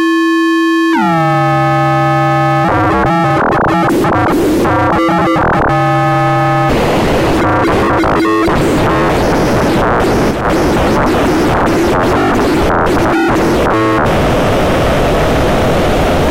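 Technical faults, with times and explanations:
10.31–10.45 s, sudden gain jump: the level drops by about 5 dB in a single step and comes back up just as abruptly about 0.14 s later. The background noise falls and rises along with the sound. That shared, instant step, with no slope, separates it from a fade or from compressor pumping, which move gradually and follow the signal. The likely cause is a digital gain setting switched without a ramp.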